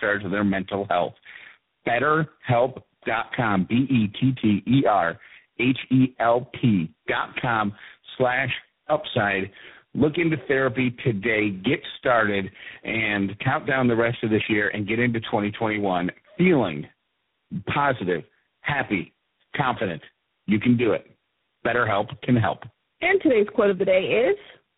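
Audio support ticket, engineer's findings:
Tandem speech coding throughout: call decoded and re-encoded at each link border, three speech codecs in series, pointing to GSM full rate, G.729A, then G.726. Each coder reworks the previous one's damage. Speech rough, noisy, muffled and warbly, nothing above 3.8 kHz.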